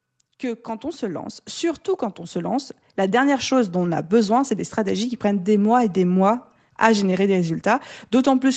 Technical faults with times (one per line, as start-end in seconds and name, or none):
0.41-3.62 automatic gain rising